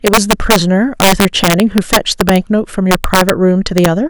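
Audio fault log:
throughout, integer overflow: violent cracks on the loudest speech peaks, sharper than clipping; gain about 5 dB too high wraps the few overshooting samples to the opposite sign.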